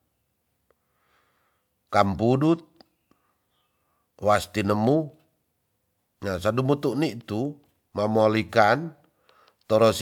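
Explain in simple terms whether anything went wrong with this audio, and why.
Nothing went wrong here: the speech comes through steadily the whole way, with no glitches, dropouts or odd sounds to point to.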